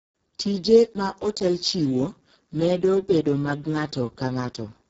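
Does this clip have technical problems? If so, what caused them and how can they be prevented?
Yes. The speech is heavily damaged by the Speex codec throughout. The excitation is starved of bits, so it sounds hoarse, noisy and near-robotic, which fits a very low bitrate of roughly 6 kbps. It lacks the swirly, metallic warble of transform codecs, and nothing is present above 7.7 kHz. Encode at a higher Speex quality setting, or use a modern codec such as Opus.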